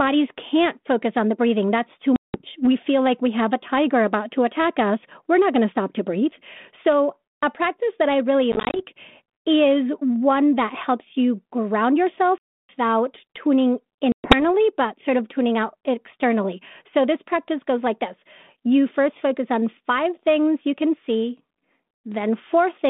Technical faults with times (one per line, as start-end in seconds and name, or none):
2.16-2.42 packet loss on an ADPCM call
8.52-8.80 packet loss on an ADPCM call
12.38-12.74 packet loss on an ADPCM call
14.12-14.42 packet loss on an ADPCM call